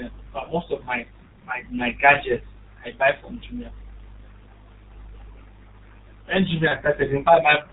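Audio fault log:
Throughout: G.723.1 codec. The speech is squeezed through a low-rate telephony codec, which fits a 6.3 kbit/s stream. Nothing above 4 kHz gets through and the voice model updates slowly in 30 ms chunks, so it sounds muffled and hoarse with smeared consonants, and the damage is heavy.
0.44–0.50 s and 6.68–6.73 s: VoIP packet loss concealed by the speech codec. Each gap fits one lost 30 ms frame. The decoder keeps extending the last pitch and filter at falling gain, giving a brief fading patch of buzz or coloured noise. The first lands just before "most of my my".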